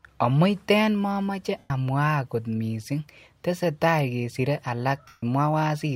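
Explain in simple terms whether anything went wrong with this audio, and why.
Lost LE Audio frames cause two short gaps in this speech, from 1.58 to 1.70 s (120 ms) and from 5.07 to 5.23 s (150 ms). Pieces of the wireless Bluetooth stream never arrived, so the decoder filled each hole by repeating the last sound it had with its details scrambled. The speech briefly turns into a hissy smear that fades away toward silence before normal sound returns.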